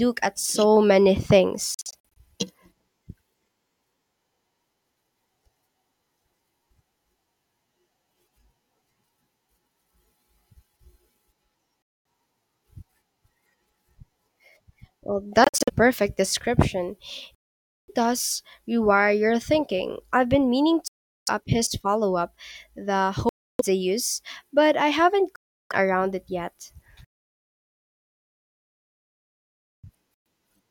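At 1.74 s the speech breaks up until 2.17 s. Short holes of silence are scattered across that 0.42 s window, about 0.21 s lost in all, the longest about 46 ms. This is a Bluetooth dropout, likely caused by audio packets arriving too late and being discarded. The speech resumes further along, as if it had kept playing through the silence.

From 2.89 s to 4.14 s, speed and pitch shift together. The speed changes by 5.5%, and the pitch moves about 93 cents, just under a semitone. This is a drift correction step. Clock-matching software likely changed the playback rate in one jump to rebalance its buffer. It sounds like a sudden detuning of the speech, with the speed shifted along with it.

More Bluetooth dropouts follow, at 11.82 to 12.05 s, 15.44 to 15.70 s, 17.35 to 17.89 s, 20.88 to 21.28 s, 23.29 to 23.62 s, 25.36 to 25.72 s, and 30.14 to 30.26 s. The one at 15.44 s is broken into short scattered gaps. 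The others are solid silences, from 0.12 s up to 0.53 s at 17.35 s. In each one the speech returns further along.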